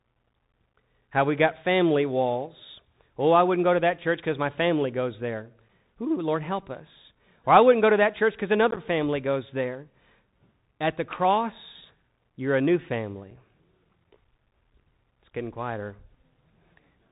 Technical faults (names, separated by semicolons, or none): Bluetooth CVSD headset codec; unconcealed Bluetooth headset packet loss